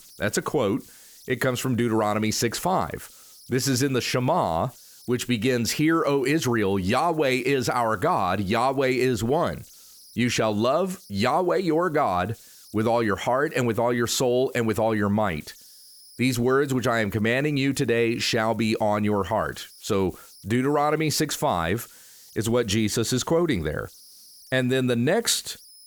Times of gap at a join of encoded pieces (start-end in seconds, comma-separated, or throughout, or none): none